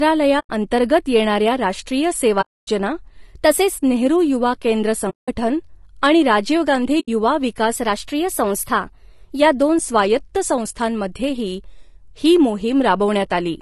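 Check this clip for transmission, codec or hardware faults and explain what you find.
The speech has a constant codec roughness, four muted gaps and two stretches where speed and pitch jump.

Low-delay AAC compression, throughout: the speech sounds rough and grainy, which fits AAC-ELD at around 32 kbps. Its short frames resolve pitch harmonics poorly, so a spectrogram shows smeared harmonics with noise filling the gaps between them and a thin, patchy top band.

AAC frame loss with muting, at 0.39–0.50 s, 2.41–2.69 s, 5.10–5.29 s and 7.00–7.09 s: the decoder zeroed lost frames, and the overlapping windows fade the sound out and back in, leaving soft holes. The waveform tapers to silence, and the spectrogram shows blank vertical bands. The lengths fit runs of 20 ms frames.

Drift correction step, at 3.22–3.78 s and 7.76–9.40 s: playback runs about 6.3% fast, raising pitch about 106 cents, just over a semitone, before snapping back. 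The likely cause is clock-matching software resampling in one step to drain its buffer. On a spectrogram the harmonics jump upward together, then drop back.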